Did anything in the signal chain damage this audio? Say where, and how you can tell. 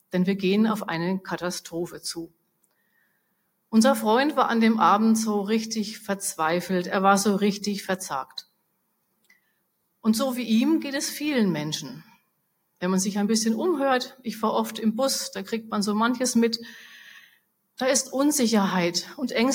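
Yes. A noise suppressor applied to music or sounds runs for the whole clip, in the call-processing stage. A suppressor built for speech treats sustained, non-voice content as noise, so the level keeps pumping up and down by around 5 dB and the sound thins.

Sound cut by the noise suppressor occurs at 2.27–3.73 s, 8.25–10.04 s, 12.04–12.82 s and 17.21–17.79 s. In each stretch, steady or decaying material drops by about 20 dB, reaching about 21 dB at the first, while sharper onsets survive.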